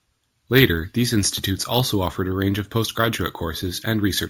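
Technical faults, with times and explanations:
Throughout: imaging from sample-and-hold upsampling. A bright metallic fizz tracks the speech's level at about 15 dB below it, with mirrored energy filling 8 to 16 kHz. Samples were repeated without smoothing, which fits a 16 kHz original raised to 48 kHz.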